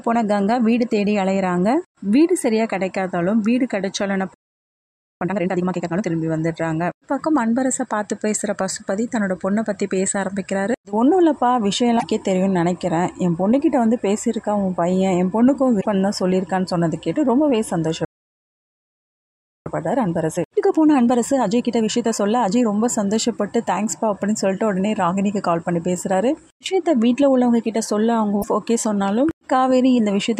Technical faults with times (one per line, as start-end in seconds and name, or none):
4.34-5.21 playback stall
5.21-6.07 time-compressed catch-up
11.96-12.04 damaged data in a compressed stream
15.77-15.85 damaged data in a compressed stream
18.05-19.66 playback stall
19.66-22.66 time-compressed catch-up
28.38-28.44 damaged data in a compressed stream